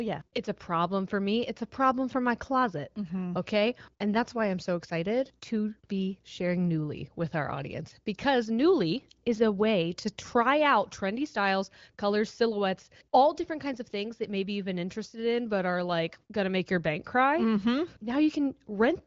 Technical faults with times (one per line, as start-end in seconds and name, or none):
none